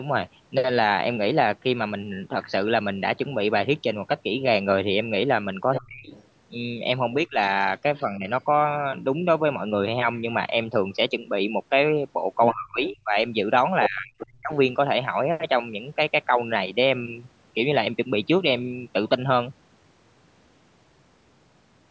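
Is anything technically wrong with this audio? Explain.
Yes. Other side's voice leaking through: at 5.72–6.27 s, 7.45–8.03 s, 12.44–12.88 s and 13.83–14.33 s, the echo canceller likely left loudspeaker echo in the microphone signal, so a second voice is heard, from faint to nearly as loud as the talker.

Speech suppressed in double talk: at 5.78–6.14 s, 7.26–8.27 s and 12.54–14.53 s, the canceller likely mistook the talker for echo during overlap, pulling the speech down in drops of up to about 35 dB.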